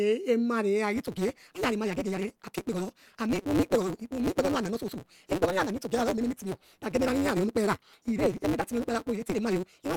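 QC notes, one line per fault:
0.94–9.96 s: block size mismatch (truncated). From 0.94 s to the end, the speech runs at 1.88 times normal speed while its pitch stays about where it was, and a steady 188 Hz buzz sits under it. One stage is handing over longer blocks than the next stage takes in, so the tail of every block is discarded. Each cut leaves a discontinuity, and these repeat at the block rate to form the buzz. The speed ratio fits a 256-sample read against blocks nearly twice that size.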